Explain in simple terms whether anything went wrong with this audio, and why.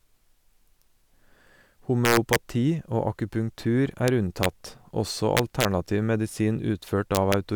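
Harsh, violent cracks break into the loudest moments of speech at 2.05–2.36 s, 4.08 s, 4.43–4.46 s (just after "akupunktur er"), 5.37–5.65 s and 7.15–7.34 s. This is integer overflow: the level went past the largest number the system could store and wrapped around to the opposite extreme instead of being held at the limit.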